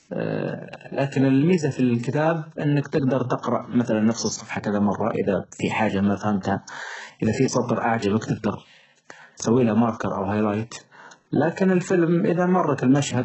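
It's a speech clip with heavy codec damage from start to finish, likely HE-AAC compression at a very low bitrate, around 8 kbps. Nothing comes through above 8 kHz, and the rebuilt treble turns s sounds gritty and metallic, with harmonics that don't line up.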